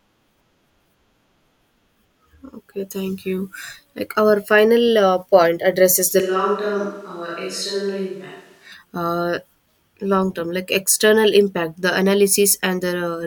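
A speech recording in which, right after "addresses the", the sound turns abruptly roomy and hollow from 6.21 to 8.72 s, losing bass, dropping roughly 5 dB and carrying room noise around 35 dB below the speech, most likely a switch to a distant microphone.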